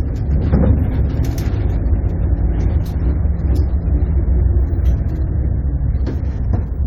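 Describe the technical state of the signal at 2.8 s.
At 2.80 to 2.82 s, compressed frames are skipped. About one 23.2 ms frame goes missing, so the audio jumps ahead by about 20 ms.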